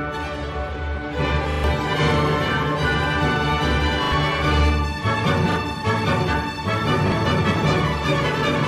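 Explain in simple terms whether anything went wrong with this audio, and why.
Yes, two things went wrong. The loudest moments all the way through have a rough, crackly edge, as if the sound is pushing against a ceiling. That is hard clipping. The audio was louder than the equipment could handle, so the tops of the biggest peaks were sliced off flat. Only a small share of the sound is affected, but those flattened peaks add a crackle the original never had.

There are also four brief stutters, where a tiny scrap of sound repeats like a skipping record: at 1.52 to 1.64 s (three repeats), 4.04 to 4.12 s (two), 5.52 to 5.56 s (one) and 7.08 to 7.12 s (one). This is a repeated buffer. Each repeated scrap lasts about 40 ms, which points to a playback buffer of that size. When fresh audio didn't arrive in time, the player replayed the last piece instead. Each stutter also swallows a moment of real sound, roughly a tenth of a second at the first one and less at the later ones.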